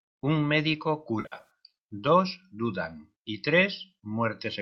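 Between 1.20 and 1.50 s, just before "dos dudan y", AAC frame loss with concealment smears the speech into a noisy, phasey patch. About 190 ms went missing in scattered gaps, the longest roughly 70 ms, likely in the low-delay AAC-ELD stream. A spectrogram shows blurred, noise-filled harmonics there, and the waveform shows a dipping envelope.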